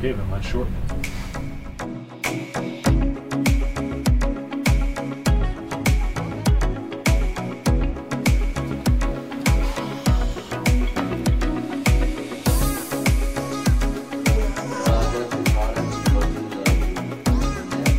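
Nothing in the audio stands out as a technical fault, so there's nothing to flag here.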